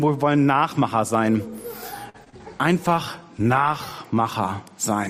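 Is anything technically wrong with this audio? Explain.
Yes, there are three kinds of network and codec faults clustered in the middle of the clip.

Short stall from a late packet, 2.09 to 2.16 s. The next packet was not there when it was due, so the jitter buffer ran dry and the receiver stretched the last sound for about 48 ms while it waited. Nothing is lost, since playback resumes where it left off, but the sound is held too long with a faint buzz or dip, and everything after it plays about 48 ms later than before.

Short concealed packet loss, at 2.24 to 2.28 s and again at 2.30 to 2.34 s. Each time roughly 20 ms of audio never reached the decoder in time. The receiver covered the gap by extending the preceding sound, through about 16 ms and then 21 ms of invented signal, before blending back into the real stream. The two come close together and are heard as a brief smear or wobble, with that bit of sound slightly blurred.

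Call bitrate drop, 2.73 to 4.04 s. The call's bandwidth estimate fell and the encoder was pushed from 128 kbps down to 24 kbps, staying at the lowest rate for about 1.25 s. At that rate Opus codes far more coarsely and trims the upper frequencies, so this stretch turns rougher, more watery or more muffled, until the bitrate climbs back.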